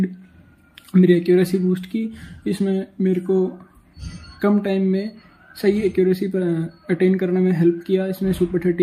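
No technical fault can be heard anywhere in this audio. There is nothing to point to, so no time, value or cause needs to be given.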